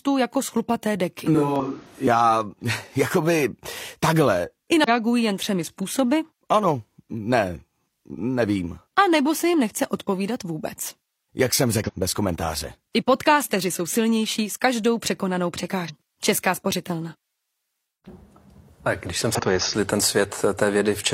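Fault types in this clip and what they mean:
switch to a distant microphone: from 1.35 to 2.07 s the sound abruptly turns hollow and roomy with thinner bass, likely a farther microphone, not a filter; level holds steady.
damaged data in a compressed stream: brief glitches where the decoder loses sync on corrupted frames, such as after "jako z chlupaté deky".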